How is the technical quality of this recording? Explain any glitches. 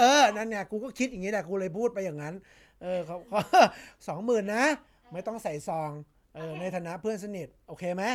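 No glitches or technical faults can be heard here.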